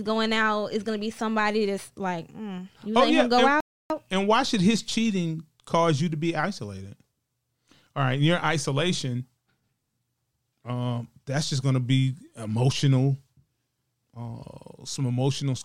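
At 3.60 s the speech drops into dead silence and picks back up at 3.90 s. That's a rebuffering stall: the player burned through its downloaded audio, had nothing left to play, and sat waiting for the next chunk to arrive. When it resumes, it carries on from exactly where it stopped, so no speech is lost. You just get a flat gap of about 0.30 s added to the timeline.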